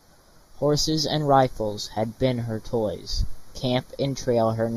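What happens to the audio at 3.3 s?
At 3.3 s the speech is hollow and phasey. That is channel delay with comb filtering, present across the whole clip. One channel lags by a fraction of a millisecond. Summed to mono, the speech cancels at fixed notches, the first near 3 kHz.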